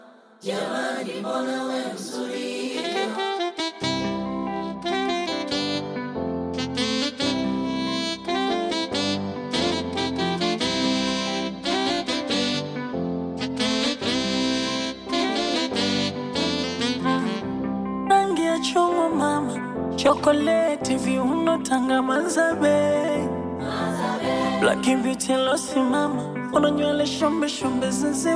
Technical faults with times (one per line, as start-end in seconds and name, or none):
none